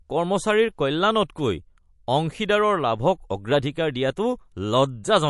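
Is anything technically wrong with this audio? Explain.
Yes. MP3 compression, throughout: nothing above 11.3 kHz, with watery, swirling s sounds, likely from low-bitrate encoding around 48 kbps that cuts treble and drops weak frequency lines.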